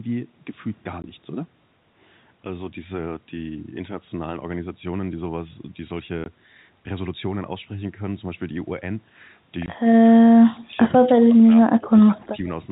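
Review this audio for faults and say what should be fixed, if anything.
Packet loss filled with silence appears at 1.02–1.04 s, 6.24–6.26 s and 9.66–9.68 s. Each gap is 20 ms, one packet's worth, replaced by digital silence with abrupt edges. Adding packet loss concealment or a jitter buffer with interpolation would mask these holes.

From 9.94 to 10.79 s and 10.98 to 12.35 s the speech dips in pieces, dropping by roughly 25 dB over about 0.7 s and 1 s of those spans. This is likely speech suppressed in double talk, where the echo canceller attenuated the talker it could not separate from the far-end echo. A double-talk detector tuned to favour near-end speech would prevent this.

The G.711 mu-law band limit at 4 kHz is audible throughout.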